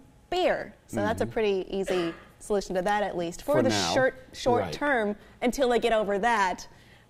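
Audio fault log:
0.12–6.87 s, periodic USB or driver dropouts: a steady ticking runs under the sound every 0.25 s, about thirty small clicks in all, heard only while signal is present. Something blocks the USB bus or the audio driver on a fixed schedule, and each time a tiny fraction of a millisecond of audio is skipped rather than filled. The waveform jumps across the gap, and that abrupt step is what makes each tick.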